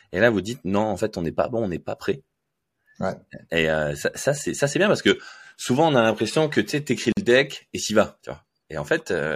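Speech with a gap at a join of encoded pieces from 7.12 to 7.17 s: a 48 ms silence where two separately encoded segments meet untrimmed. On a waveform it shows as a flat dropout; on a spectrogram, a thin blank vertical band with slightly smeared edges.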